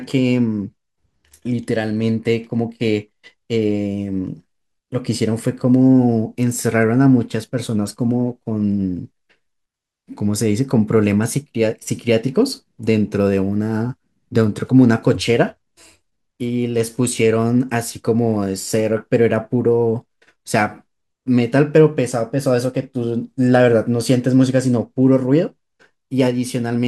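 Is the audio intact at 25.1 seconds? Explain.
Yes, the audio is intact at 25.1 seconds, with no fault audible at that moment.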